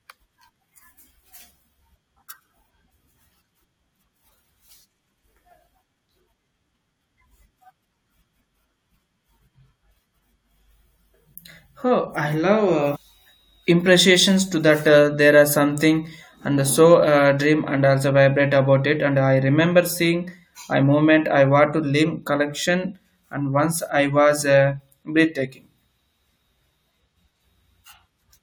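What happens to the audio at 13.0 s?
Damaged data in a compressed stream causes a brief blip from 12.95 to 12.97 s. Corrupted frames make the decoder lose sync and hunt for the next frame header.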